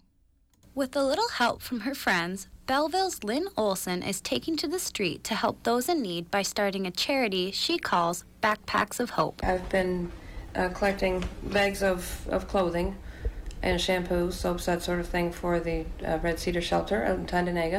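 Call bitrate drop, 7.63 to 11.97 s: starved of bits, the encoder codes coarsely, leaving rough, watery sound that fits a fall from 128 to 19 kbps.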